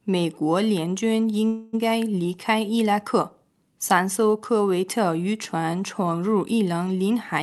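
At 1.47 s the sound stops moving forward and the last moment is stretched into a fading buzz for about a quarter of a second, until 1.75 s. Then the audio picks up exactly where it left off. This is a call audio freeze, likely caused by packets held up in transit so the jitter buffer ran dry. What sets it apart from packet loss is that nothing is skipped. A gap is inserted, and everything after it arrives that much later. The call path's coding and the high-frequency limit near 12 kHz fit Opus at a moderate bitrate.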